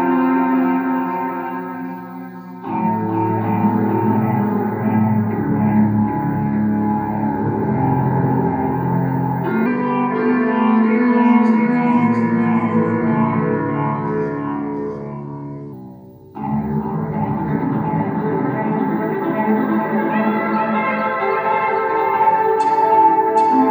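From the first moment to the last, every sound arrives twice. A doubled audio track runs under the whole clip. A second full-band copy trails the original by roughly 0.7 s. It is about as loud as the first. It carries no decay and no added room colour, so it reads as a clean repeat rather than an echo. The likely cause is the same signal captured again through a slower path, or two copies left out of step in an edit.

From 9.66 s to 15.73 s, a section plays at the wrong speed. It runs 1.12 times faster than it should. Pitch and tempo rise together, so everything in that stretch sounds higher and more hurried, roughly two semitones up. The change is immediate at both ends. The likely cause is that part being played or edited against the wrong clock.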